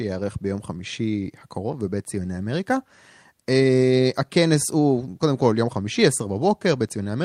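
No technical faults are audible anywhere in the speech.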